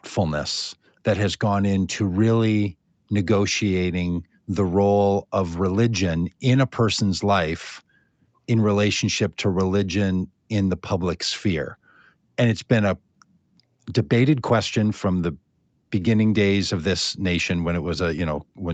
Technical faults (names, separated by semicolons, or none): none